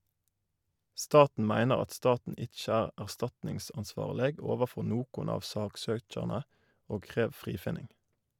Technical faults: none

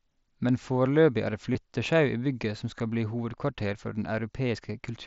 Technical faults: concealed Bluetooth headset packet loss

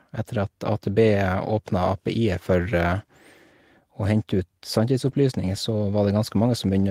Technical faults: lost packet rebuilt from error correction

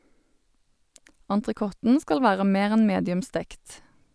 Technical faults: none

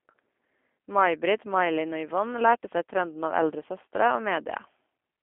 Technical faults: G.729 codec

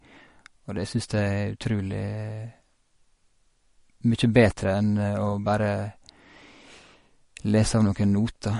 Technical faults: MP3 compression

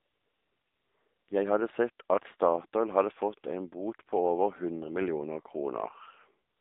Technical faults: AMR narrowband mobile codec; AMR comfort noise

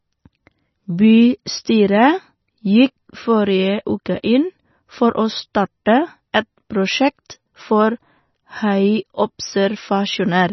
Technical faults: MP3 compression

